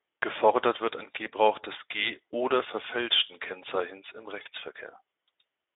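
Throughout, the speech carries Speex codec damage. The sound is plainly hoarse and noisy, which fits a Speex setting around 11 kbps. The band is confined to roughly 300 Hz to 3.7 kHz. Unlike transform-codec artefacts, there is no swirling or warbling. The roughness sits in the voicing itself, because the CELP excitation is starved of bits.

From 4.41 to 4.48 s comes VoIP packet loss concealed by the speech codec. About 40 ms went missing, which fits two lost frames. A plain dropout would leave silence or a click. Here the decoder instead stretches the last pitch and filter into a short buzzy tone or coloured noise that fades, and the voice stays weak briefly after the audio resumes.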